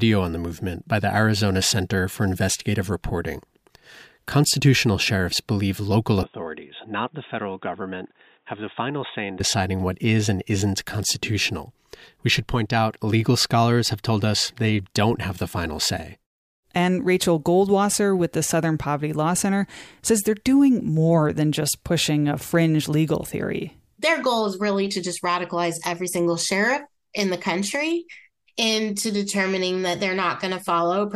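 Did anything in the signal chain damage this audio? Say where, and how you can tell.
Yes. The input was likely switched to a poorer device from 6.23 to 9.40 s, after "sheriffs believe local" until "what is and isn't". The speech loses everything above 3.8 kHz, drops about 5 dB and gains new background noise about 40 dB down, with no silence at either switch.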